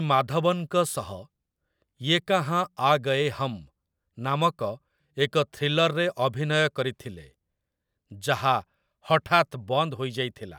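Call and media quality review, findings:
No defects found in the speech signal during review; playback, levels and continuity show nothing requiring action.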